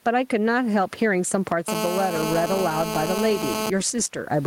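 A speech recording where the level never sits still: you can hear gain pumping throughout, with the background swelling in the pauses and ducking around 10 dB under each loud syllable, likely from the input gain being set far too hot and a fast limiter clamping down. From 1.68 to 3.7 s there's also GSM phone buzz, a harsh, raspy 217 Hz drone full of harmonics at about 5 dB below the speech. It holds steady, which fits a nearby phone on a call whose transmit bursts are being rectified by the audio circuitry.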